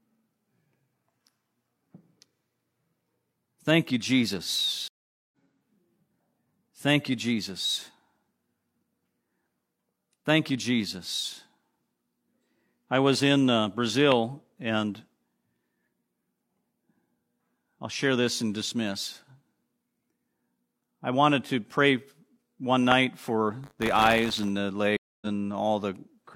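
Stream reconnect, 4.88 to 5.32 s: the speech cuts to silence for 443 ms when the connection drops. The player then reconnects and starts a new decoder partway through the stream, so the speech picks up again about half a second further on than where it stopped. The material in between is simply missing. It is heard as a hard dropout followed by an abrupt jump forward in the speech.

Loud pop, at 14.12 s and again at 22.92 s: each is a single sharp click about 20 dB above the speech. Each is a brief voltage pulse added on top of the signal, likely from a plug, switch or static discharge, and the downstream circuitry shapes it into a pop. The speech carries on underneath both pops without interruption.

Buffer tearing, 23.63 to 24.51 s: a robotic 100 Hz buzz rides on the speech. The writing and reading positions in the playback ring buffer have drifted until they cross inside each period. 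A small slice of every buffer, on the order of a few percent, therefore plays audio from roughly 40 ms earlier, with hard joins on either side. The 100 Hz repetition fits a 10 ms buffer period.

Stream reconnect, 24.97 to 25.27 s: a second dropout, this one 248 ms of silence. The fresh decoder restarts the speech about 0.3 s later than where it broke off.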